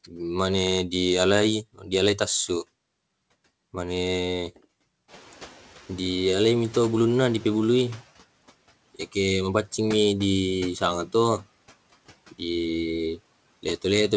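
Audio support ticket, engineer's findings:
Speech cut by the noise suppressor, 1.74–1.89 s: a short stretch of speech sinks by up to about 15 dB along with the background. No gap or click, so this is the suppressor mistaking speech for noise, not a dropout.

Noise suppressor catching up, 5.08–8.03 s: room noise jumps about 15 dB near 5 s and passes through under-suppressed, then eases down about 8 dB over 2.95 s. The slow, steady fade marks noise-estimate lag, not gain pumping.

The band stops at 8 kHz, which points to a G.722 call path.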